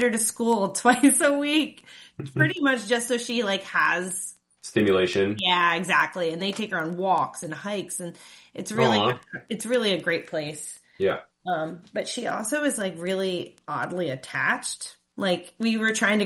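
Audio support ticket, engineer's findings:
Resampler restarted on every block: steady ticking at 10 per second, whole clip, only under signal. Sounds like 100 ms blocks converted one by one, with silence or the block's other end standing in for neighbours at the edges. Points to a 24 kHz to 48 kHz upsample stage.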